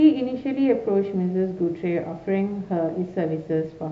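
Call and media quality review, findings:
No faults found in this call and media quality review.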